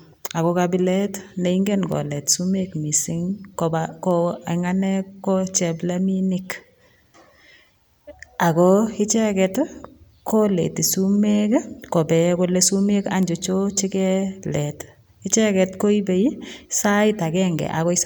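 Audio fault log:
1.92 s, 4.11 s and 13.23 s, bit error spike: three isolated sharp ticks, at about -12, -18 and -12 dBFS, after "ago kabilet ne ingen", after "kolet sumek mising kopa" and after "kole sumek". Each is one corrupted sample jumping by a power of two, so the click is broadband and unrelated to the speech.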